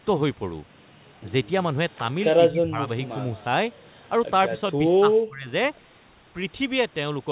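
A speech recording over a narrowband call path, with nothing above about 4 kHz. The talker's own voice is pushed down by speech suppressed in double talk, likely because the echo canceller mistook simultaneous far-end talk for echo. This happens from 2.5 to 2.89 s (about 20 dB), briefly at 4.73 to 4.79 s (about 10 dB), and from 4.97 to 5.49 s (dips as deep as about 35 dB). It is a loss of the voice itself, not an added sound. The opposite happens with echo leak, where an extra faint copy appears, trailing by 214 ms and roughly 30 dB below the speech, at 3.04 to 3.08 s and 3.36 to 3.44 s. This is likely loudspeaker pickup that the canceller failed to remove.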